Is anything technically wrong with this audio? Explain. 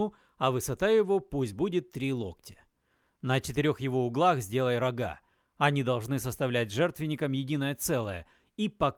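No, nothing is technically wrong with this audio.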